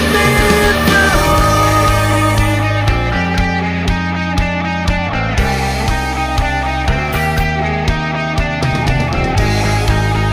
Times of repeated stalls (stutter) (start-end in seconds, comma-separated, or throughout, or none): none